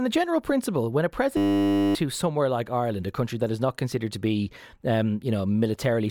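Right after "general principle when a", at 1.37 s, the speech locks into a system hang loop. The machine or driver stalled while the sound hardware kept replaying the same tiny stretch of its ring buffer. Each pass is 10 ms, which points to a very short buffer, so you hear a steady buzz at 100 Hz instead of a stutter. It holds until 1.95 s, then picks up at "somewhere like", and roughly half a second of speech is gone.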